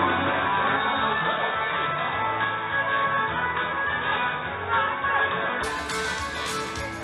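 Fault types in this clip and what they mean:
Input switched to a poorer device: From the start to about 5.63 s the audio is band-limited, with nothing above 3.8 kHz, so it sounds dull and boxy. It then opens up to full bandwidth with no gap at the transition. The level shifts modestly at that point, and a faint noise floor well below the signal is present only during the narrow stretch. The likely cause is the input running on a different, lower-quality microphone or headset call profile before returning to the main device.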